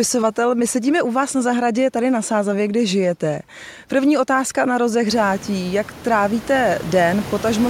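No technical faults can be heard in the speech signal; the background noise of the room, which climbs by about 25 dB at around five seconds and then sits about 16 dB below the speech, belongs to the recording itself.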